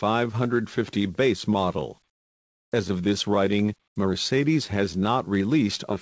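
From 2.08 to 2.72 s and again from 3.88 to 3.96 s, the background gives way to a flat, featureless hiss, about 17 dB and about 15 dB quieter. This is comfort noise in place of the background, likely from a call codec pausing transmission and the receiver synthesising stand-in noise.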